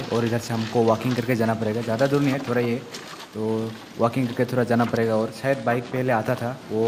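No technical faults can be heard anywhere in this audio.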